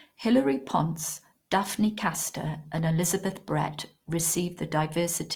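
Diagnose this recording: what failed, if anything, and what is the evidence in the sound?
The codec stage failed: likely Opus compression in music mode at around 24 kbps, filling starved bands with noise, so the speech sounds rough and grainy throughout despite reaching about 20.5 kHz.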